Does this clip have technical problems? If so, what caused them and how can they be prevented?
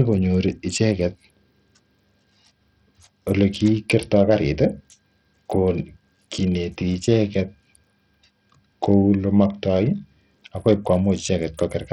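Yes. Heavy Bluetooth SBC compression, likely, throughout: starved upper sub-bands make the speech's treble flicker with gritty aliasing, unlike a clean low-pass, which fits a low bitrate around 64 kbps. Use a wired connection or a higher-bitpool codec.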